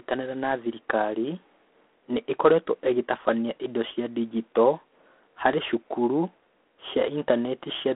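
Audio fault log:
Throughout, G.726 ADPCM: a harsh, rasping hiss rises and falls with the speech level, as each sample is coded as a coarse difference from an adaptive prediction. The roughness fits the 24 kbit/s mode. The band runs from 250 Hz to 3.5 kHz, with nothing above 3.9 kHz.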